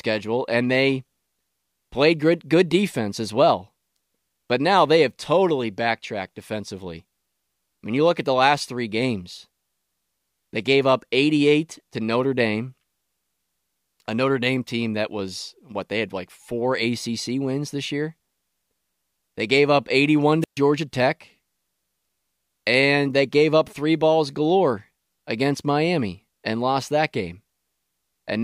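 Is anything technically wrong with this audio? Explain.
Yes. From 20.41 to 20.58 s there is a wireless microphone squelch dropout: the radio link fades, hiss rises, the receiver's squelch mutes about 131 ms, then speech returns. The hiss before the silence distinguishes it from a clean digital dropout.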